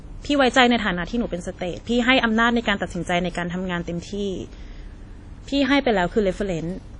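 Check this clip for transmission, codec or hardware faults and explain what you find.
There's one codec fault, running through the whole clip: WMA compression, and the damage is plainly audible. The speech has a ringing, washy quality with a hiss that swells and fades along with the voice, and there's nothing above 10 kHz. That's likely a transform codec with long blocks smearing its quantisation noise over tens of milliseconds and dropping weak spectral detail, which fits a low bitrate of around 32 kbps.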